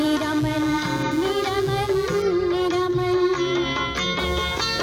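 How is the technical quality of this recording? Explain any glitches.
The recording carries computer activity noise throughout: a buzzing, chirping texture pulsing at roughly 150 Hz, around 25 dB below the sound. Processor, graphics or mouse load shifts the shared ground, so unlike steady mains hum, it fluctuates with computer activity, not the sound.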